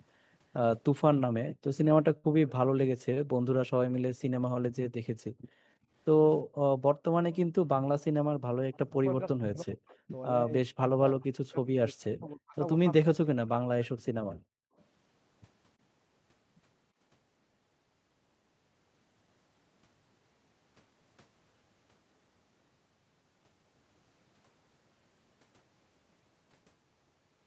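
From 1.49 to 8.43 s, the room background repeatedly dips, falling by up to about 40 dB for roughly a second and a half in all. This is background gated by the echo canceller, which clamps the microphone while the loudspeaker plays.

At 2.17 to 2.27 s, the last sound is briefly held and fades, and then the sound jumps ahead with about 60 ms missing. This is a burst of packet loss, concealed for 61 ms.

At 3.14 to 3.20 s, a sound is held about 23 ms too long with a slight buzz or dip, but nothing is lost. This is a short stall from a late packet that emptied the jitter buffer.

From 4.91 to 4.95 s, the speech drops out sharply and deeply for 40 ms. This is likely speech suppressed in double talk, with the canceller turning down both the talker and the loudspeaker echo.

From 7.32 to 8.76 s, a faint, delayed copy of the voice trails 337 ms behind, far below the speech level. This is likely an echo leak from a loudspeaker whose echo canceller let residue through.

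From 8.74 to 13.64 s, the speech repeatedly dips deeply or cuts out in pieces, for roughly three seconds in total. This is likely double-talk suppression, with the canceller attenuating the talker during overlapping speech.

From 13.83 to 14.84 s, the faint trailing copy returns, again delayed by 337 ms, which is likely further echo leak.

From 14.40 to 14.76 s, the background drops away for roughly 0.4 s. This is more background gated by the echo canceller.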